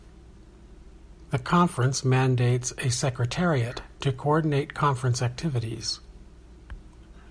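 Nothing in this speech recording stands out as a technical problem at any point, so there's nothing to flag here.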